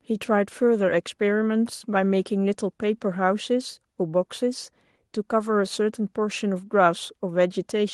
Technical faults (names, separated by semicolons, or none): none